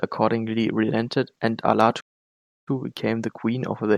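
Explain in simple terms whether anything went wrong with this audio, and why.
At 2.0 seconds, right after "accordingly relented and", the speech suddenly cuts to silence and stays silent for about two-thirds of a second, until 2.68 seconds, when it picks up again with "became the queen". This is a playback stall. The likely cause is that the player ran short of audio data, or was briefly held up, so it had nothing to send out until it caught up and carried on.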